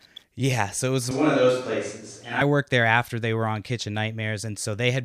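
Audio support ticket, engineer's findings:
Switch to a distant microphone, 1.11–2.41 s, after "so it was" until "worked there after they". Sudden roomy, hollow tone with thinner bass, level barely changes, room noise about 35 dB under speech. Close-mic feed likely dropped, distant pickup substituted, then abrupt return.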